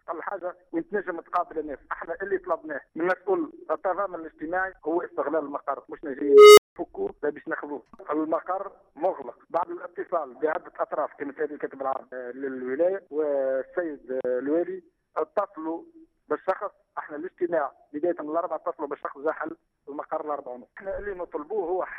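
At 6.19 s an unstable filter runs away. A tone near 400 Hz swells over about 0.39 s, clips, then overflows into 0.19 s of silence.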